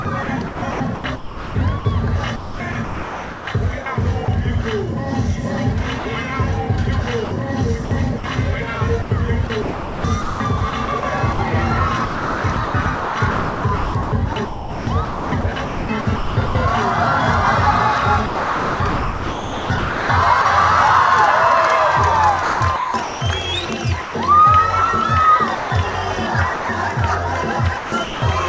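From 0.02 to 4.28 s the sound is chopped by the voice detector: about 1.83 s of it is lost and replaced. This is likely the sender's detector repeatedly switching off on quiet stretches, with comfort noise filling each gap. At 5.99 to 6.05 s a single 60 ms piece of sound is dropped by the voice detector. It gives way briefly to steady noise or near silence and then returns. Unlike the chopping, this is one clean gap rather than a stutter, most likely one false decision that the sound was background.

The chopping returns at 7.25 to 16.55 s (about 3.81 s replaced), 18.26 to 20.45 s (1.68 s), 22.43 to 24.14 s (0.69 s), 25.55 to 26.69 s (0.33 s) and 27.77 to 28.22 s (0.33 s). Throughout, the G.722 call path leaves nothing above 8 kHz.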